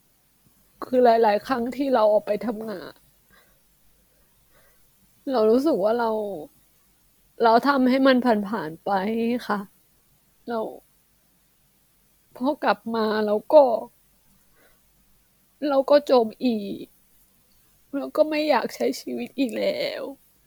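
No technical faults can be heard anywhere in the speech.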